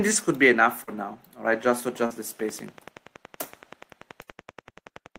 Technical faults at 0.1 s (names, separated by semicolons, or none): none